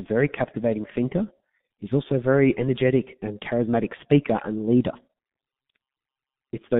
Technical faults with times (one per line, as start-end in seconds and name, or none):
0.00-6.80 G.723.1 codec